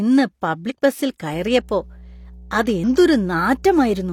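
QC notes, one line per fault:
0.66–0.72 s and 2.84 s, damaged data in a compressed stream: two brief blips break into the speech. The first lasts about 60 ms and the second is near-instant. In each, corrupted bytes in the compressed stream made the decoder misread or drop the affected frames and lose sync. It then hunted for the next valid frame header. That failed decode produces the short break in the speech.
1.34–4.13 s, mains hum: a steady low 60 Hz tone enters at 1.34 s and continues to the end of the clip, sitting roughly 20 dB below the speech. Its constant pitch and its lock to the power-line frequency point to a ground loop or a nearby transformer coupling the supply into the signal path.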